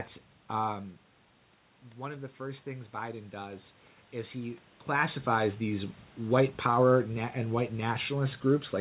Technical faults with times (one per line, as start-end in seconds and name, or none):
1.95-6.48 automatic gain rising